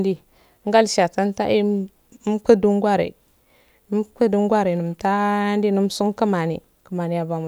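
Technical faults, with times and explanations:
No technical faults can be heard in this speech.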